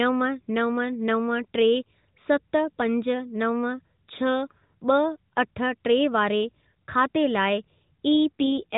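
From 8.40 s to the end, an AMR rate drop roughens the speech, fitting about 5.9 kbps. The spectrogram keeps its 4 kHz ceiling and shows no gap, only blurred harmonics.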